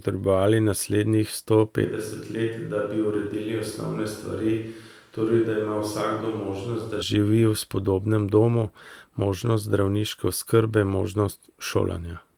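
A switch to a distant microphone runs from 1.85 s to 7.02 s. The speech suddenly turns roomy, hollow and thin in the bass, drops about 5 dB, and picks up more background noise, though that noise stays far below it. The close microphone's feed was likely lost, and the return to it is equally abrupt.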